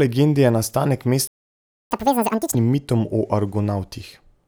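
At 1.27 s, right after "legendi je nastanek", the speech just stops dead and stays silent until 1.91 s, a gap of about 0.64 s. That's a playback stall: the player most likely ran dry of buffered audio or had its thread blocked, so nothing reached the output until it got going again. It doesn't sound like a pause in the talking; the flow is cut off mid-stream, and the resumption feels abrupt.

From 1.91 s to 2.55 s you get catch-up at higher speed. The player pushes the backlog out at twice normal speed by resampling, so everything runs fast and jumps up in pitch by roughly ten semitones, giving that chipmunk effect. It's clawing back all of the time it lost in the stall, and once that burst is over it settles back to normal speed and pitch just before "mitom o".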